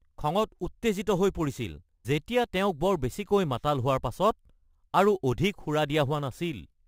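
Throughout the speech there is imaging from sample-and-hold upsampling: each sample was simply repeated, with no smoothing filter, pointing to a 24 kHz source raised to 44.1 kHz. Mirrored copies fill 12 kHz to 24 kHz at about 26 dB down, giving a metallic fizz that tracks the speech.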